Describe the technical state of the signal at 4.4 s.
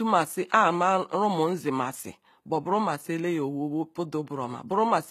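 At 4.4 s, as throughout, the speech shows likely HE-AAC compression, consistent with about 20 kbps. Unlike a plain low-pass, treble persists up to 14.9 kHz, but it is copied up from lower bands, so harmonics misalign and s sounds turn gritty and lispy.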